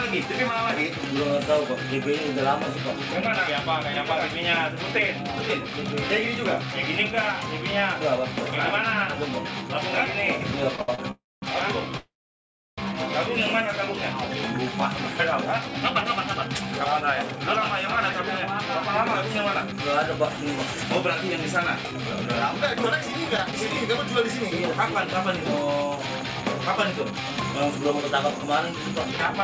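From 10.76 to 10.99 s there are repeated stalls (stutter): four brief gaps, the longest 67 ms, where late packets left the jitter buffer empty and the receiver stretched the last sound. Over half that span is filled-in audio, so it drags and judders but loses nothing.

Two call audio freezes follow, at 11.11 to 11.43 s (309 ms) and 11.97 to 12.79 s (805 ms). Unlike the stutter, each is one long hold, likely from packets stuck in transit. The continued sound fades to silence for about 210 ms and 690 ms, then the audio resumes where it stopped, now later by the full gap.

From 15.45 to 18.69 s and again from 19.63 to 29.34 s, a jitter buffer speed-up plays the audio about 5% fast, trimming roughly 150 ms and then some 400 ms in pitch-period slices to cut the built-up delay. The pitch stays put while the pace sounds hurried, which sets it apart from a simple tape-style speed change.

At 23.37 s and 23.52 s, short concealed packet loss drops about 10 ms each time. 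The gap is patched by extending the preceding sound, heard as a tiny smear or wobble rather than a stall. Throughout, the G.722 call path at 64 kbps leaves nothing above 8 kHz.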